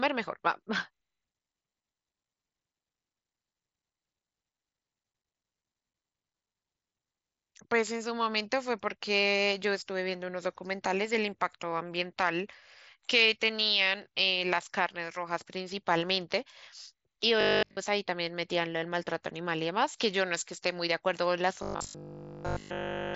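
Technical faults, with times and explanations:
17.41 to 17.79 s and 21.63 to 23.15 s, robotic sound from repeated short buffers. Speech turns into a rigid 50 Hz metallic buzz. A 20 ms buffer was likely replayed almost continuously.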